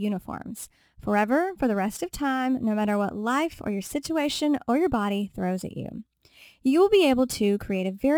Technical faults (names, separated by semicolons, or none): crude rate conversion